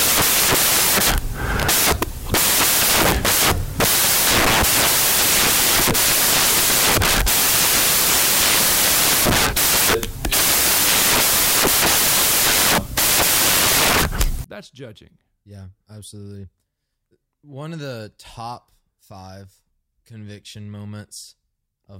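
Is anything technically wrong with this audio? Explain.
Yes, there's a clear case of samples built from the wrong bytes from the very start, 0.00 s, through to 14.44 s. The reader is assembling each sample's bytes incorrectly, whether shifted by a byte, in swapped order or at the wrong alignment, so the jittery low-order bits end up as the big part of every value. That comes out as loud, harsh broadband noise, close to white on the louder speech.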